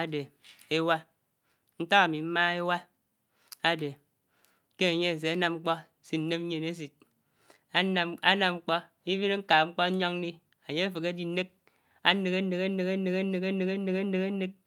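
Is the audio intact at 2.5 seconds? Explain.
Yes, at 2.5 seconds the audio is intact, with no dropout, click, distortion or other technical fault at that moment.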